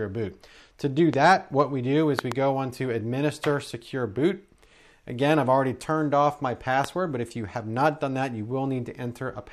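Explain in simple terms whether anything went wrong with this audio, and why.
There are loud pops: a sharp one at 1.14 to 1.16 s, a quick double pop from 2.19 to 2.34 s, and another at 6.84 to 6.86 s. The likely cause is a sudden electrical jolt, such as a plug, switch or static. The sound carries on underneath each pop.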